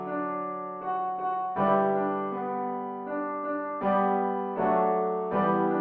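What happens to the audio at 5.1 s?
Nothing goes wrong at 5.1 s; the audio plays through that moment intact, with no dropout, click, distortion or other fault.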